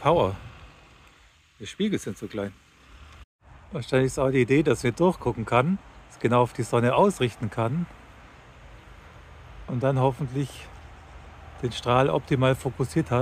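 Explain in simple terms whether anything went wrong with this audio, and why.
Nothing went wrong with the audio: it comes through as one steady signal with no technical faults.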